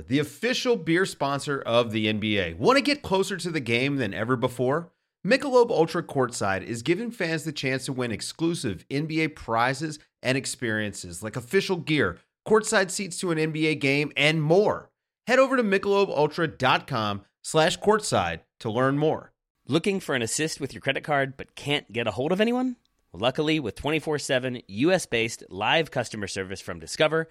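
Nothing in this recording stands out as a technical fault, so there's really nothing to flag here.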